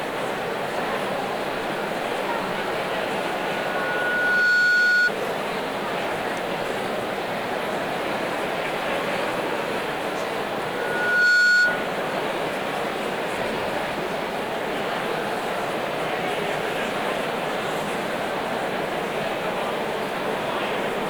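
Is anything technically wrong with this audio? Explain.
Yes, there are two problems.

Throughout the clip there is a grainy, rough distortion that rides on the sound itself. It sits around 25 dB below the signal, and quiet passages turn gritty. The likely cause is low bit depth without dither. The signal appears to have been rounded to very few levels, which fits roughly 6 bits. Because no dither was added, the rounding error tracks the waveform and is heard as distortion.

There is also loudspeaker feedback squeal at 3.13 to 5.11 s and again at 10.66 to 11.92 s. In each case a single 1.5 kHz tone swells up, taking about a second and a half the first time and under a second the second time, until it stands around 10 dB above the rest of the sound. This happens when a microphone picks up a loudspeaker it is feeding and the loop gain at 1.5 kHz exceeds one. That frequency then grows until something limits it or the loop is broken.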